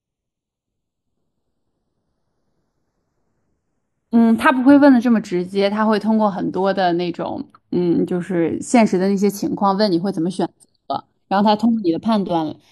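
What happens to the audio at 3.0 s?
At 3.0 s you're hearing channels drifting apart, which runs through the whole speech clip. The two sides sit on clocks that are off by something like 50 ppm, so their offset keeps creeping toward about 0.3 ms. In mono, comb notches slide slowly, giving a slow flanging.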